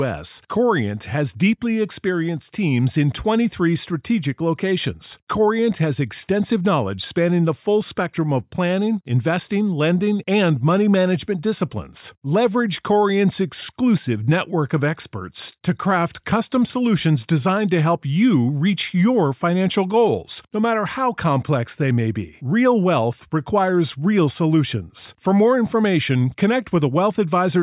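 No technical faults are audible.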